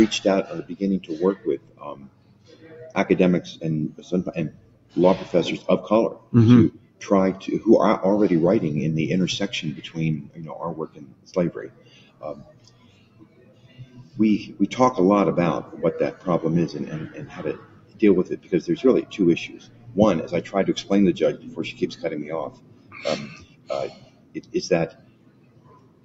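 A noise suppressor built for speech stays on across the whole clip. It reads steady tones, ambience and decay as noise. Its gain swings by roughly 20 dB, so the sound pumps and thins while attacks pass through.

The suppressor cuts the sound harder at 1.36–2.71 s, 4.51–4.96 s, 6.18–7.01 s, 10.23–14.16 s, 17.57–19.96 s, and from 21.37 s to the end. Held and fading parts sink by up to about 12 dB. Tails end early. Nothing is heard above the 8 kHz limit of the call path.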